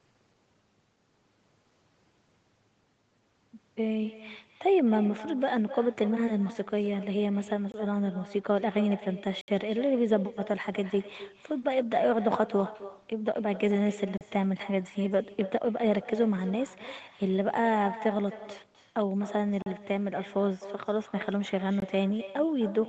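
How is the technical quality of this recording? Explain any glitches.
The recording has two problems: a constant echo and five brief dropouts, heard through a call link whose sound stops at about 8 kHz.

Echo with no canceller runs throughout. The far end's loudspeaker feeds its microphone, and nothing removes the return, so every phrase is shadowed by a copy about 15 dB quieter, arriving roughly a third of a second later. That fixed delay and the thinner tone distinguish it from natural room reverberation.

A block of digital silence occurs at 7.72–7.74 s (20 ms), 9.41–9.48 s (68 ms), 14.18–14.21 s (34 ms), 19.62–19.66 s (40 ms) and 21.80–21.82 s (20 ms). The output buffer most likely wasn't filled in time, so the sound cut out with no fade. The abrupt cut and return distinguish these from a jitter buffer's smoothed concealment.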